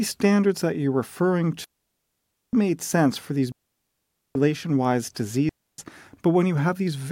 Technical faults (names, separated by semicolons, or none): digital wireless dropout